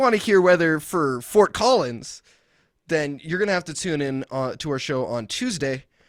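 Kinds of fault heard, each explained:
Nothing in the recording stood out as a problem on listening.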